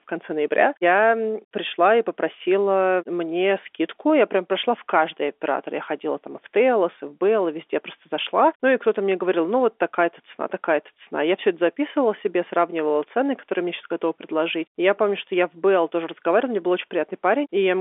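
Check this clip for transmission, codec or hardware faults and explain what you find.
No faults are audible: the speech sits in a telephone band of about 300 Hz to 3.5 kHz, as expected from G.711 telephone coding working normally, with its level-following quantisation noise faint at most.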